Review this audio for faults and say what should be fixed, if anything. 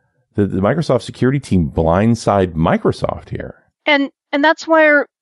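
Bluetooth LC3 compression runs through the whole clip. The speech has a plainly audible breathy, grainy edge, most likely from a transform codec that drops parts of the upper spectrum and fills the gaps with shaped noise instead of the real detail. The edge fits LC3 at 48 kbps with 7.5 ms frames. To prevent it, raise the LE Audio bitrate or choose a higher-quality LC3 configuration at the source.

Lost LE Audio frames occur at 3.40 s, a brief 7.5 ms dropout that fits one missing frame. The LC3 decoder filled the gap by repeating the previous frame's spectrum with randomised signs. This turns that instant into a short noisy smear rather than silence. To prevent it, improve the radio link by reducing distance and interference, or use retransmission settings that give frames more chances to arrive.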